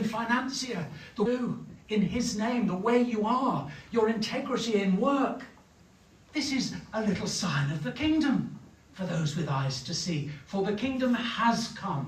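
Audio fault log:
1.25 s skip ahead. About 0.7 s of sound is missing, and playback jumps straight forward with no gap. The receiver dropped that stretch, likely from an overflowing jitter buffer, while later audio was already queued. The two sides of the jump join almost directly.
1.37 to 3.74 s jitter buffer speed-up. The sound runs about 6 percent fast at unchanged pitch, so it feels slightly hurried. The receiver repeatedly removed pitch-period-sized slivers, about 150 ms in total, to shrink an over-full buffer.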